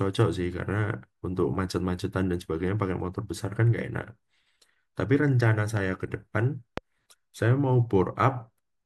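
A speech clip with two loud pops, from 5.77 to 5.79 s and 6.78 to 6.80 s. The second is louder. Both likely come from a voltage spike or switch glitch.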